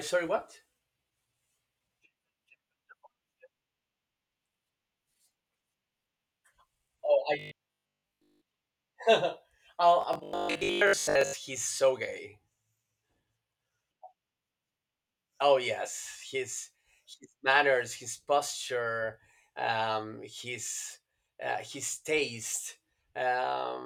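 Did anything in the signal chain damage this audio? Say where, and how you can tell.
Yes. At the driver or buffer stage, audio likely arrived too seldom, so 20 ms slices were replayed: robotic sound from repeated short buffers, a rigid 50 Hz buzz at 7.39–8.45 s and 10.01–11.35 s.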